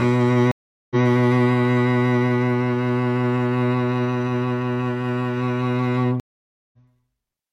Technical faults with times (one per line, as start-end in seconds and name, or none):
0.51-1.04 stream reconnect
6.20-6.78 stream reconnect